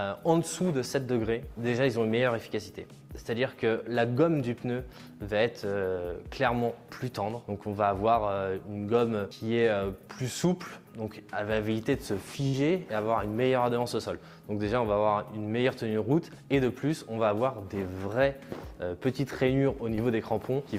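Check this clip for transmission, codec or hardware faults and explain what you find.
Two transmission faults are audible, both from packets that arrived too late or not at all.

From 12.47 to 12.55 s there is a burst of packet loss. The receiver extends the last sound for about 58 ms, fading it, and then skips ahead past about 60 ms of missing audio. It sounds like the last sound briefly held and sinking away before an abrupt jump. A spectrogram shows smeared, repeated bands decaying, followed by a hard seam.

From 19.95 to 19.99 s there is a short concealed packet loss. About 20 ms of audio is missing, and the receiver fills the hole with about 22 ms synthesised from the preceding sound, then blends it back in. It is heard as a tiny smear or wobble. The waveform shows a short, unnaturally regular stretch.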